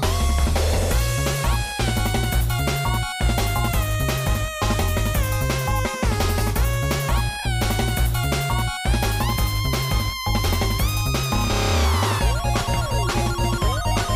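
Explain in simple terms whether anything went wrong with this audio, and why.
Two short dropouts come from lost LE Audio frames: around 7.39 to 7.46 s and at 12.59 to 12.61 s. The decoder patched each gap with reused noisy copies, so the sound briefly smears.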